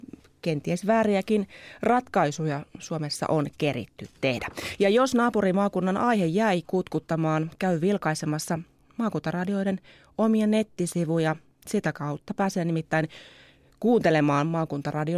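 No technical faults can be heard anywhere in this speech recording. Nothing in the signal calls for comment at any point in the clip.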